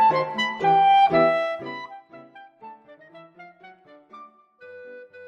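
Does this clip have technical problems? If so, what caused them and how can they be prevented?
Yes. From 1.24 to 2.04 s a fast ticking, zipping texture rides on the sound as its level drops by roughly 25 dB. This is zipper noise: the gain change was applied as a staircase of small jumps, around 70 per second, instead of a continuous ramp, and each abrupt jump puts a tiny click into the waveform. To prevent it, smooth the gain per sample, for example with a short ramp or one-pole filter on the gain value.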